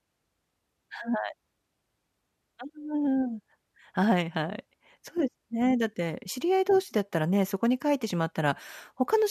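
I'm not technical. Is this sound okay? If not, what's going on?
Yes, nothing stood out as a problem when I listened to this recording.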